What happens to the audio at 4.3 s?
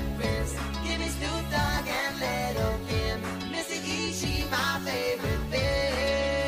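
Nothing goes wrong at 4.3 s; the audio continues there without any audible fault.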